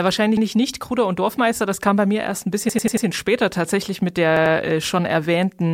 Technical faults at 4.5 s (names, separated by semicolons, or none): repeated buffer